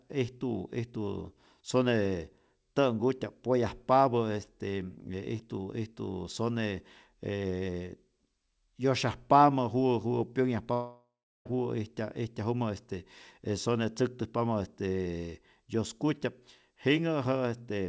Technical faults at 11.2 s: long network dropout

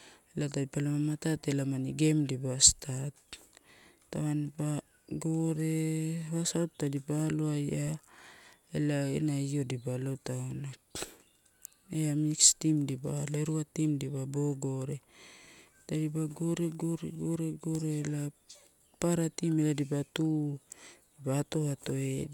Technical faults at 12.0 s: none

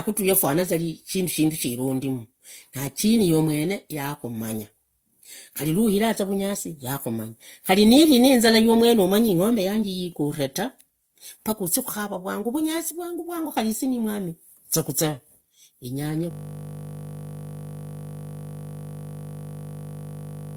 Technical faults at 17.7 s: transcoding between lossy codecs; system hang loop

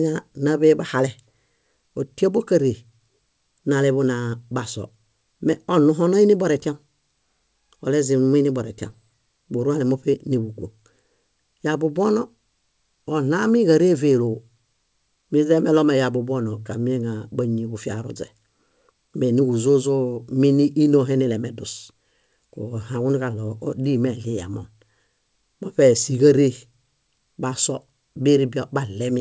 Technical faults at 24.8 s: none

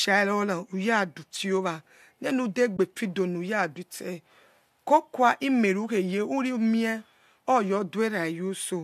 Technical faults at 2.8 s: AAC frame loss with muting

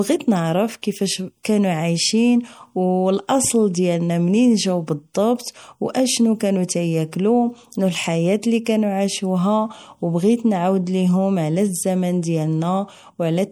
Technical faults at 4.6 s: MP3 compression

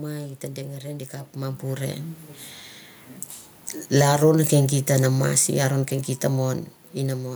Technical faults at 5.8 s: automatic gain falling

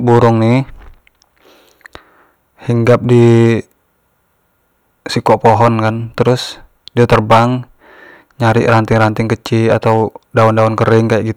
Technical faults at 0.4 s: hard clipping

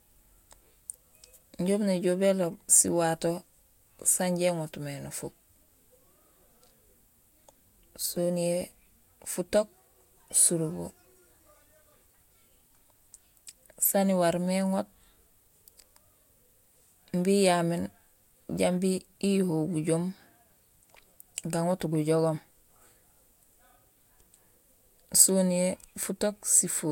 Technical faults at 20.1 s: none

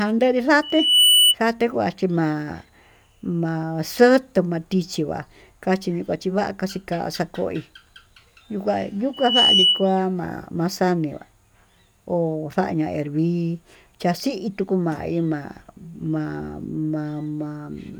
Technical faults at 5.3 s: none

